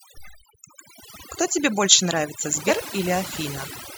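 A speech recording with overdone noise removal throughout: the noise reduction was set so aggressively that it pulls individual frequency bands down or out whenever they sit near its noise estimate. The background collapses into near silence with twinkling specks, and the voice has its quieter components stripped along with the noise. Compressed frames are skipped between 2.67 and 2.71 s, where whole frames never reached playback, either missing or rejected by the decoder as damaged. The audio jumps ahead by roughly 50 ms.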